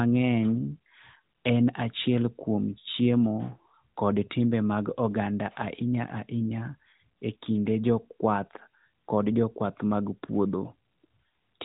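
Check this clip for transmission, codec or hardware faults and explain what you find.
No faults turn up anywhere in this speech recording.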